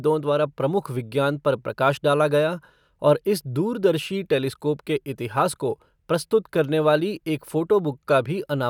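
Nothing stood out as a technical fault anywhere in the speech on listening.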